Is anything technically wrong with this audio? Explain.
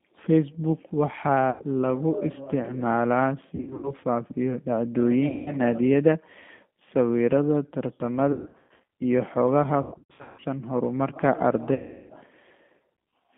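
Yes. The speech runs through a G.729 codec throughout. It carries about 8 kbit/s and a 150 Hz to 3.5 kHz line band, so it sounds thin, rough and synthetic.

VoIP packet loss concealed by the speech codec occurs six times: 1.50–1.63 s (before "lagu isticmaalaa"), 3.55–3.93 s, 5.28–5.56 s, 8.32–8.83 s (before "iyo xogaha"), 9.82–10.44 s (after "iyo xogaha") and 11.74–12.13 s. The decoder stretches its last sound into a buzzy tone or coloured noise that fades, and the speech recovers slowly afterwards.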